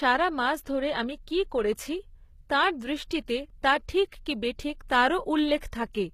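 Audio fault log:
throughout, HE-AAC compression: a low bitrate, likely around 20 kbps, leaves the treble rebuilt from lower bands, so sibilants sound gritty and metallic, with nothing above 14.9 kHz.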